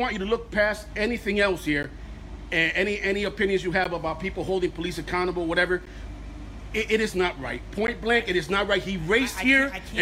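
At 1.83, 3.84, 5.86 and 7.87 s, the sound drops out briefly. Each is a gap between chunks, about 13 ms of silence. The audio arrived in 2-second pieces, with silence left between them. Nothing is lost, but regular holes interrupt it.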